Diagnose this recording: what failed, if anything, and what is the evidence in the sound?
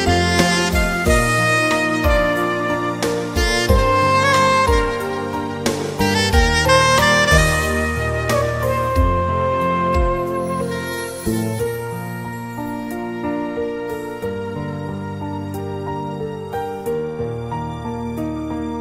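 Nothing in the signal chain shows a failure: the audio holds steady throughout, with no dropouts, discontinuities, level jumps or changes in timing anywhere in the recording.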